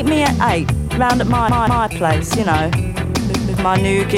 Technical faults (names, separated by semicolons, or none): repeated buffer